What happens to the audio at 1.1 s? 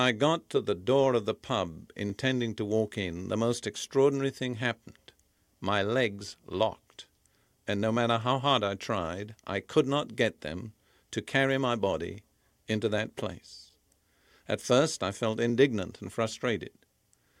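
At 1.1 s the speech sits inside a run of clock drift buffer slips, lasting from 0.42 s to 17.16 s and recurring every 0.84 s. Two mismatched clocks likely force a few dozen samples to be dropped or repeated, producing regular clicks that show as waveform discontinuities and thin vertical broadband lines.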